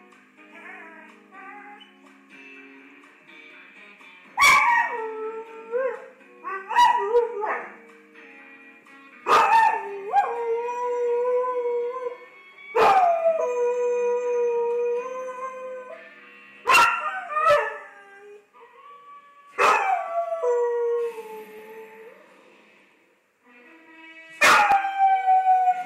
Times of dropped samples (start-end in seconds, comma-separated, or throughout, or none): 3.50, 4.48, 16.68, 21.59, 24.72